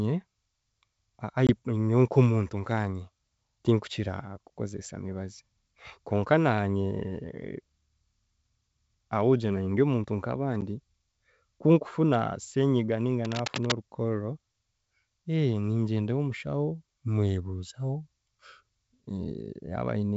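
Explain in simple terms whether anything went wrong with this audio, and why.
Yes, two things went wrong. First, the call lost data in transit, which is called packet loss on an ADPCM call. At 1.47 to 1.51 s about 20 ms of sound went missing, roughly a couple of packets' worth, and at 10.61 to 10.63 s about 10 ms, roughly one packet. Each gap is a short, sharp-edged hole of silence. The decoder predicts each bit of sound from the bits before it, so after a gap it briefly loses track and needs a moment to settle.

Second, from 13.23 to 13.75 s there is cable scratch noise, a half-second of harsh scratching or rustling laid over the speech and fairly loud next to it. The likely cause is a worn cable, plug or control being moved, so that its electrical contact kept changing rapidly.

The wideband telephone coding itself, G.722, is working as intended.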